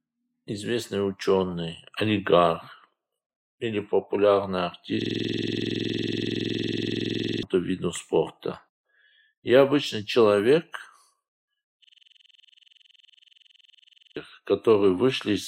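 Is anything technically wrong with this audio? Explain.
Yes. A system hang loop appears twice, from 5.02 to 7.43 s and from 11.84 to 14.16 s. The system stalled while the playback hardware kept replaying its ring buffer, so one 46.4 ms piece, which fits a 2048-sample buffer, repeats about fifty times at 21.5 Hz. That produces a rattling, machine-gun stutter, and roughly two seconds of audio go missing each time. A dropout would leave silence, but here the same fragment repeats identically and at a perfectly steady rate.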